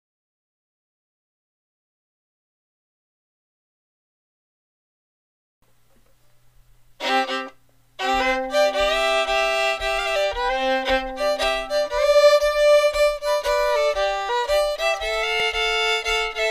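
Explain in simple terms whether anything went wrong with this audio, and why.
At 15.40 s there is a repeated buffer: new audio arrived late, so a tiny, roughly 1.5 ms slice played three times, causing a brief click or buzz.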